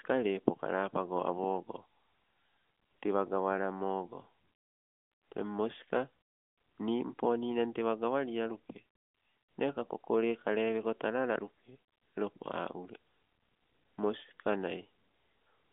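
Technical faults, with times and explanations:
No faults turn up here; the speech comes over a narrowband mobile line using the AMR narrowband codec at 12.2 kbps, so it sits in a roughly 200 Hz to 3.5 kHz band with nothing above about 3.7 kHz, just as that kind of call would.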